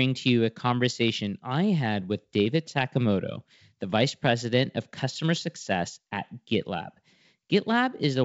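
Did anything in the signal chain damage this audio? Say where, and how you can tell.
No, nothing in the chain audibly damaged this speech. It carries the sound of G.722 wideband telephone coding at a rate that fits 64 kbit/s, with the band reaching to about 7 kHz and at most a faint hiss above 4 kHz.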